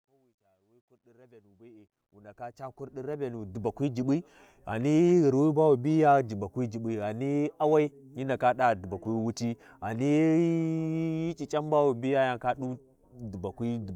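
Speech clip with truncation distortion on its fade-in from 0.0 to 3.78 s, gritty and worst before 1.3 s, fitting undithered 12-bit gain: stair-stepped waveform, broadband spectrogram hash.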